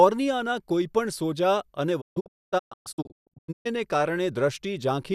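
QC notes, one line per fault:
2.00–3.67 s, digital broadcast dropout: the receiver muted whenever frames failed, leaving repeated holes totalling about 1.2 s across 1.6 s, the longest 240 ms, each entered with a 20 ms fade. The waveform and spectrogram show blank gaps with tapered edges.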